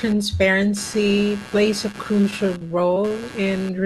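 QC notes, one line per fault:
throughout: computer activity noise. Load changes in the computer are shifting the ground the audio circuit shares, which puts a buzzy, chirping pulse at around 150 Hz under the speech. It sits roughly 20 dB below the speech and follows the machine's activity rather than the talker.
1.91–3.47 s: repeated packet loss (robotic sound). Starting just after "plays a", packets go missing again and again, the longest hole about 29 ms. The decoder patches each hole by stretching the preceding sound, about 8% of this stretch, so the speech turns choppy and robotic with small pieces dropped.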